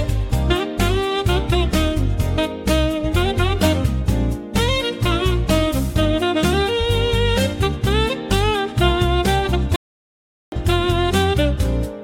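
At 9.76 s the sound cuts out for about 0.76 s, a playback stall, likely the player starving of data, before resuming at 10.52 s.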